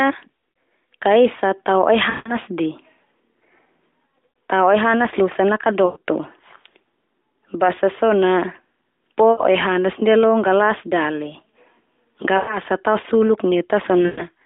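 Lost AMR speech frames occur at 0.57, 2.10–2.35, 4.34, 5.86–5.98 after "oe hanas losa", 9.32–9.42, 12.38–12.58 before "a tao", and 14.06–14.24 s. The narrowband decoder patches each gap with repeated, decaying parameters, so short losses dip or warble and the longest stretches smear toward silence.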